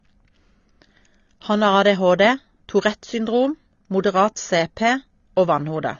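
From start to finish the speech is band-limited. Nothing sits above about 6.9 kHz, so it sounds dull and muffled. Sibilants come out smeared and fizzy. Sustained sounds warble. The damage is plainly audible. This points to AAC compression, likely AAC-LC at a low bitrate, around 24 kbps. With so few bits, the encoder drops the top of the spectrum. It then quantises the remaining frequency lines coarsely, leaving gaps that shimmer.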